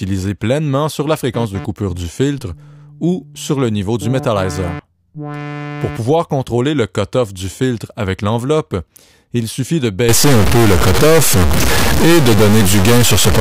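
From 10.09 s to the end at 13.41 s, the sound turns harsh and buzzy, with a loud noise floor filling the quieter moments. This is a stuck bit, likely a high-order data bit held fixed, shifting about half the samples by a large step near -5 dBFS.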